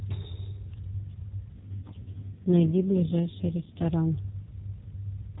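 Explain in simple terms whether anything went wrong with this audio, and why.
From about 1.56 s to 3.86 s the speech turns rougher, buzzier and more synthetic, then returns to its earlier quality. That is an AMR rate drop. The phone network told the mobile speech codec to use fewer bits for the voice, likely to protect the signal on a weak radio link. Unlike a dropout, the sound never cuts out, and unlike a bandwidth loss, the voice doesn't get thinner or more muffled. Only its texture coarsens.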